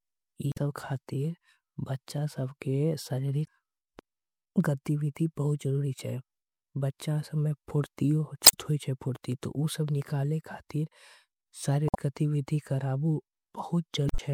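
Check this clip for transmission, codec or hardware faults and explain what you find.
One fault recurs through the speech: five bursts of damaged data in a compressed stream.

Damaged data in a compressed stream occurs at 0.49–0.58 s, 3.44–3.48 s, 8.43–8.54 s, 11.86–11.95 s and 14.07–14.20 s. At each point, corrupted bytes in the encoded stream cause the decoder to misread the affected frames, lose sync and hunt for the next valid frame header. Each event lasts roughly 40 to 130 ms and is heard as a brief chirp, squawk, click or short hole cutting into the speech.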